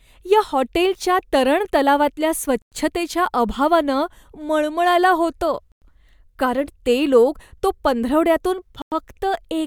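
Gaps between chunks occur at 2.62 to 2.72 s, just after "या हॉटेलच्या तरण तलावातल्या", at 5.72 to 5.82 s, just before "कारण ते लोक तो", and at 8.82 to 8.92 s, after "ते लोक तो पंधरवड्यातून". The speech was delivered in 3.0 s pieces, and each join left a 100 ms stretch of silence rather than a seamless handover. Nothing is dropped, but each gap is a sharp-edged hole recurring every three seconds.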